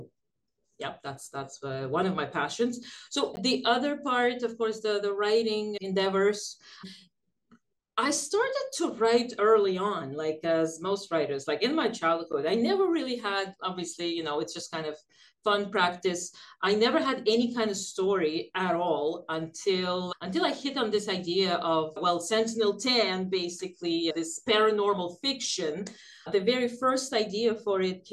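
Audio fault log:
3.36 s and 12.33 s: block of digital silence. The output drops to silence for about 14 ms and then 10 ms with no fade, so each gap sounds like a brief tick. The waveform shows a flat line with abrupt edges, and the spectrogram shows a thin vertical broadband stripe at each edge.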